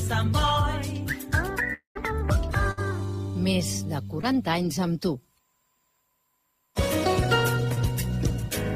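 At 1.73 s the audio breaks off for about a quarter second, to 1.97 s. The last sound is carried on as a fading buzz or hiss, then roughly 120 ms of near silence, and the sound resumes with about 220 ms gone. That is likely a long network dropout. Unlike shorter loss, the fill runs out into silence.

From 2.71 to 2.79 s comes a burst of packet loss: 60 ms never arrived. The receiver stretched the preceding sound and let it fade, so a held buzz or hiss bridges the gap, then the audio jumps ahead.

Short concealed packet loss appears at 4.21–4.25 s and again at 7.75–7.78 s, each losing about 20 ms. The decoder extrapolated the prior sound briefly and blended back, leaving only a quick smear or wobble rather than an audible fade.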